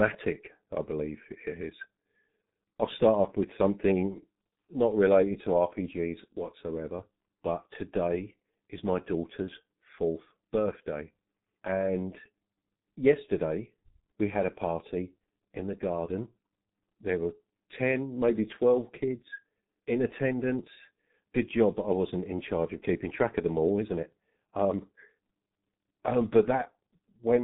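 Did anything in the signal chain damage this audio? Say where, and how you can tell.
Yes. The damage sits at the codec stage and runs through the whole speech clip: it carries heavy G.723.1 codec artefacts. The top end stops dead at about 3.8 kHz, so sibilants and plosives lose their crispness and consonants smear together. The voice sounds muffled and hoarse because the coder models the vocal tract in coarse 30 ms frames that cannot track fast changes, and the depth of the degradation fits a very low bitrate near 6 kbit/s.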